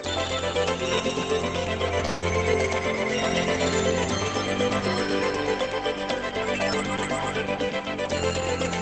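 From 2.05 to 2.25 s there's a long network dropout, likely: the receiver smears the last sound into a fading buzz for about 167 ms, 120 ms never arrives, and the timing jumps around 50 ms.

Right at the tail, 2.22 to 2.28 s, a lost packet is rebuilt from error correction: 60 ms of rougher, noisier sound from Opus's low-bitrate backup copy, inside the call path's 8 kHz band.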